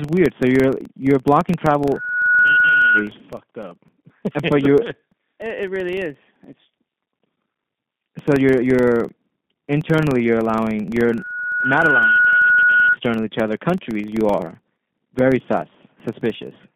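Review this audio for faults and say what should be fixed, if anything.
The speech runs through a G.729 codec throughout: band-limited to roughly 150 Hz to 3.5 kHz at 8 kbit/s, rough and synthetic. Unlike plain low-pass filtering, the speech itself sounds rebuilt. Prevent it by using a wideband codec such as Opus or G.722 on this link.

A 23.4 Hz buzz runs throughout, which fits a filter restarted on every block of 2048 samples. It differs from mains hum because it tracks the speech level and disappears in pauses. Prevent it by carrying the filter state across block boundaries.

A loudspeaker feedback squeal at 1.5 kHz occurs from 1.85 to 3.10 s, after "you're you're blocking" and before "fucked up but". It occurs again from 11.09 to 12.96 s, after "you're internally you're allowing" and before "to other countries you". They swell over roughly 0.7 s and 1.0 s respectively to about the level of the speech. 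Unlike a test tone, it grows by itself. Prevent it by lowering monitor gain, repositioning the microphone, or adding feedback suppression.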